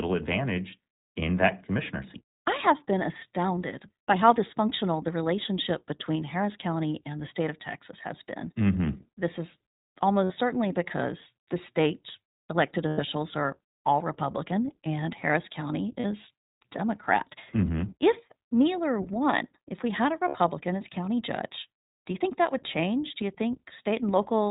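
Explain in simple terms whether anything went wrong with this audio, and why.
The whole recording has gone through the iLBC codec, a narrowband phone-call codec. It throws away everything above 4 kHz, so the speech sounds muffled and boxy, as if heard down an old phone line. It also codes each 20 ms slice of sound on its own, and the damage is plainly audible: the voice has a slightly rough, synthetic edge rather than sounding natural.

On top of that there are four short dropouts, which are lost iLBC frames. Bits of the stream never arrived, so the decoder filled each gap by repeating the last bit of voice with some noise mixed in. That gives a brief held, buzzy vowel sound. They happen at 10.24 s for about 60 ms, just before "certainly because the state"; at 12.88 s for about 100 ms, between "because the state elected" and "are all"; at 16.0 s for about 40 ms; and at 20.28 s for about 60 ms, between "if we had a" and "as county judge do". 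The voice snaps back straight after each one.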